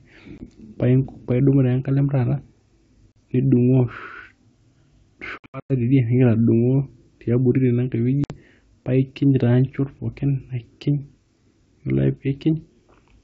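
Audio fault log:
0.38–0.46 s, 3.12–3.17 s, 5.38–5.72 s, 8.24–8.33 s: packet loss on an ADPCM call. Hard-edged silent holes remove 20, 40, 240 and 60 ms. At 5.38 s the 240 ms is scattered over 320 ms, with the longest run 100 ms. What sets this apart from a simple dropout is what follows each hole. The sound returns slightly distorted, settling over some tens of milliseconds. The decoder's predictor and step size have drifted from the sender's and must re-converge.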